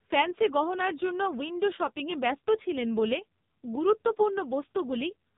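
AMR narrowband mobile codec damage runs through the whole of this speech clip, and it is heavy. Nothing above about 3.8 kHz survives, so the sound is confined to the narrow telephone band of 8 kHz sampling and loses all its upper brightness. The vocal-tract model, driven by only a few pulses per 5 ms segment, leaves the speech buzzy and synthetic, which fits one of the lowest AMR-NB modes, around 5.9 kbps.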